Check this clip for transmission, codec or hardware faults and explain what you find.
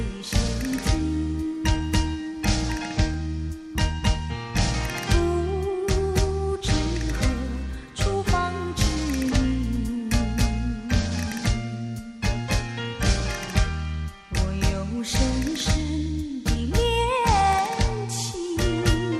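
There are two DC steps, one at 3.14 s and one at 9.76 s. At each, the waveform's zero line suddenly jumps by about -28 dBFS. A 20 Hz high-pass then pulls the offset back towards zero. Each jump is heard as a brief low thump. The sound itself carries on unchanged.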